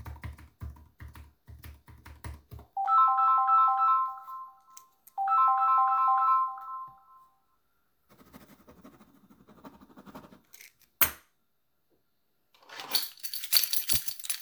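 No faults are audible anywhere in the recording.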